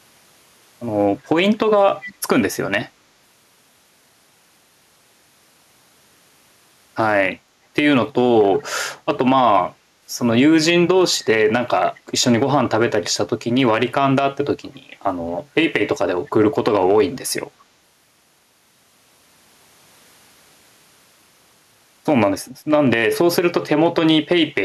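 Echo leak at 2.0–2.15 s and 11.96–12.0 s: speech returns 227 ms late, about 15 dB then 30 dB down, likely from a loudspeaker-side echo canceller leaving residue.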